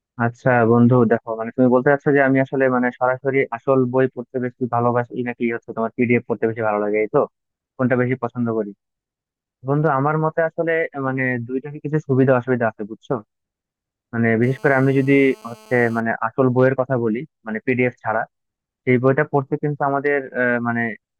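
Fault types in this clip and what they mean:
GSM phone buzz: A 2G phone nearby pulses its radio about 217 times a second, and the audio circuit turns those pulses into sound. Here it is a hard, raspy buzz with many harmonics, steady as during a call. It sits about 29 dB below the speech.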